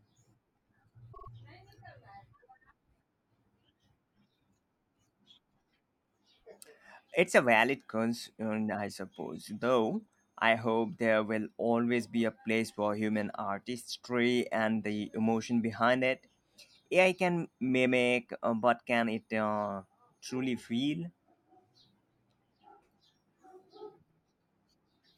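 Repeated frames at 1.12 to 1.28 s: a 48 ms block of the speech, which fits two compressed frames, plays three extra times, so it stutters, and the clip runs 144 ms longer.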